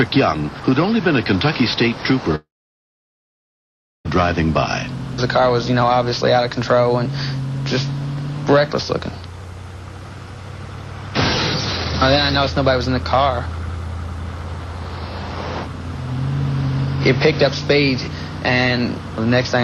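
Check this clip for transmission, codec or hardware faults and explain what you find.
One fault stands out, a long network dropout from 2.35 to 4.07 s. The sound just before it smears into a brief, fading buzz, followed by about 1.6 s of near-silence, and the audio resumes with 1.7 s of material gone. The likely cause is a halt in arriving packets, with the receiver extending the last sound only briefly. Unlike a short packet-loss glitch, it lasts far too long to smooth over, and unlike a clean hardware mute, it begins with that decaying tail.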